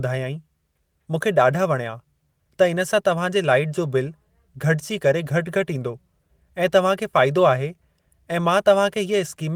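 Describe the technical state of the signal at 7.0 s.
At 7.0 s the signal is intact, with no audible technical fault at that moment.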